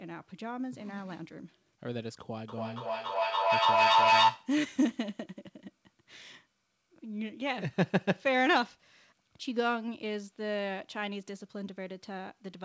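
Feedback howl from 2.48 to 4.57 s: sound loops between microphone and loudspeaker, gaining level each pass, so a tone near 1 kHz swells to about 7 dB above the speech, with the loop repeating roughly every 300 ms.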